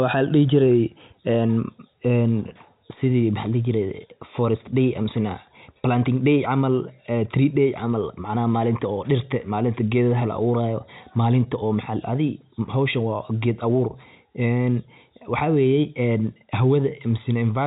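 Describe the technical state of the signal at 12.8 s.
At 12.8 s the speech is intact, with no fault at that moment, and it carries the G.711 telephone coding of the whole clip, which leaves nothing above about 3.8 kHz.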